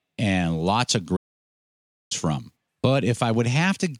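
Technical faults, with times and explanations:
1.16 to 2.12 s, playback stall: right after "lots of" the speech simply stops and the output sits in dead silence for about 0.94 s, then picks up again. That's most likely the player running dry of buffered data, or its audio thread getting blocked, so it had nothing to output until it recovered.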